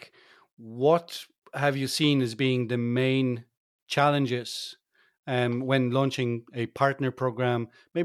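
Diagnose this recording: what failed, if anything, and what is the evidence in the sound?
Nothing in the signal chain shows a failure; no stage leaves an audible mark anywhere in the recording.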